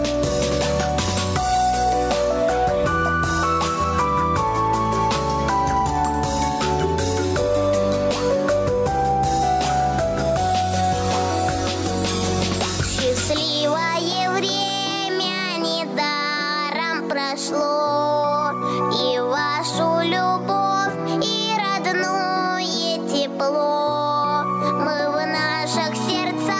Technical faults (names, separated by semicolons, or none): gain pumping